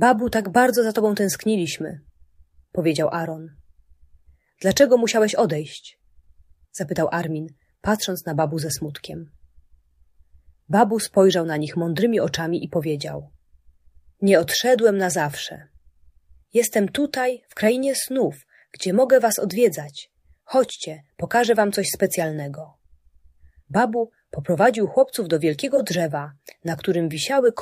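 No technical faults can be heard anywhere in the audio, and the signal holds steady throughout without any break in continuity, level or tonal balance.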